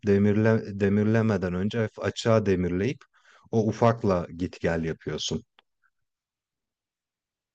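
Two unsynchronised clocks likely drift around 300 ppm apart, slipping one sample about every 70 ms from 0.15 to 7.48 s: clock slip clicks, a faint steady rattle.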